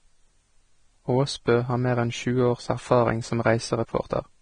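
From start to finish the speech has a hissy, grainy treble, and nothing at all comes through above about 9.7 kHz. That's likely Vorbis compression at a low bitrate, somewhere near 24 kbps, with the fine top-end detail quantised so coarsely it turns into noise and blurs the consonant attacks.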